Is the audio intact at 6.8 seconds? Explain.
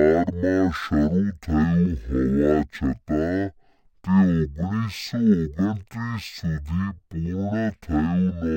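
No. The stereo file is being read as mono: its interleaved left and right samples are treated as one channel, which affects the whole clip. At 6.8 seconds the speech plays at half speed, an octave low, with a fainter mirror image in the upper spectrum.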